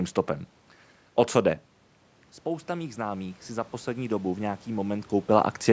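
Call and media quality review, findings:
Automatic gain rising, 2.45–4.52 s: speech and room noise swell together over about 2 s. Probable component: call AGC. The input level fell by about 11 dB, and the AGC ramped its gain up by about 6 dB to compensate. Waveform: the envelope widens steadily across the span, with gaps between phrases thickening too. Spectrogram: the noise floor brightens in step with the speech bands, all below the 8 kHz ceiling of the call microphone processing.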